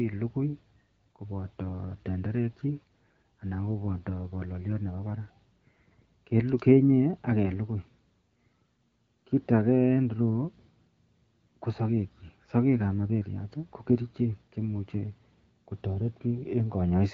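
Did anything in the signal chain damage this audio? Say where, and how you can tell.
Yes. On the network, AMR bit errors from 7.45 to 7.54 s corrupt unprotected bits in what sounds like about five frames, briefly turning the speech hoarse and gargly.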